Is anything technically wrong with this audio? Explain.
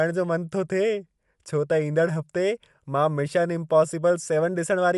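Yes, the speech carries Bluetooth LC3 compression damage for its whole length. Everything above about 11.6 kHz is missing, and the upper band has a breathy, grainy texture where the likely cause, an LC3 transform codec, has discarded fine spectral detail and filled gaps with noise. The artefacts point to a mid-range setting of around 48 kbps with 10 ms frames. On a spectrogram there is a hard ceiling at 11.6 kHz and smeared, blocky high-frequency patches, while the waveform looks largely intact.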